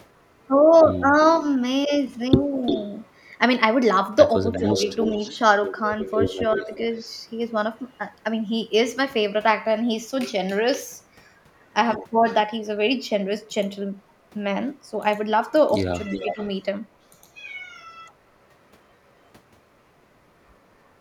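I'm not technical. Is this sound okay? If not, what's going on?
No. Echo leak from 1.28 to 7.97 s, plus 11.60 to 11.65 s, 16.11 to 16.47 s and 19.24 to 19.29 s: a second copy of the sound trails about a third of a second behind. It's clear early on and faint at 11.6 and 19.2 s. The likely cause is a speakerphone whose echo cancelling failed to remove all of its own playback.

Speech suppressed in double talk between 4.55 and 6.7 s, and from 16.23 to 16.4 s: the sound dips noticeably in short patches, adding up to a few tenths of a second, likely because the echo canceller turned the speakerphone side's voice down along with the echo while two sides overlapped.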